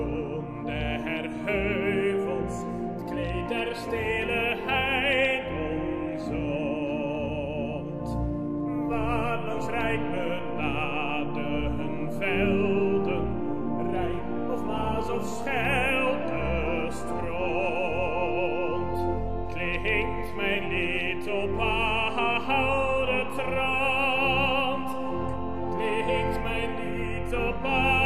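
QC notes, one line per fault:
8.93 s to end: DC step. The waveform's zero line jumps by about -34 dBFS at 8.93 s and sits there for the rest of the clip. You hear it as a single low thump right at the jump, while the sound carries on unchanged over the offset.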